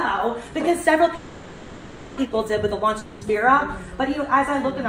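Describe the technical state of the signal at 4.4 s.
At 4.4 s the signal is intact, with no audible fault at that moment.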